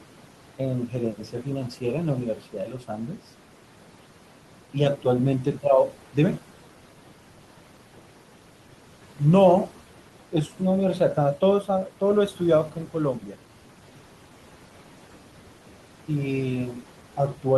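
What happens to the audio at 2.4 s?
The noise suppressor mistook part of the speech for background noise between 2.35 and 3.21 s, pulling it down by as much as about 12 dB. Roughly half that span is affected, so the soft consonants, word endings or quiet phrase caught there come out swallowed and faint. These are noise suppressor artifacts: the same frame-by-frame gain, trimming the steady noise by about 12 dB, runs through the whole clip. The remaining noise dips between syllables and swells beneath them.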